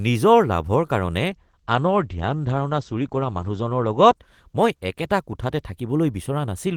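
From 1.27 s to 5.99 s, a call bitrate drop. Highs vanish above 8 kHz. Speech turns coarse and muffled, which fits about 12 kbps.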